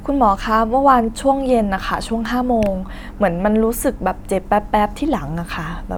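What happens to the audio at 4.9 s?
Nothing goes wrong at 4.9 s; the speech carries on intact through that moment, with no dropout, click, distortion or other fault.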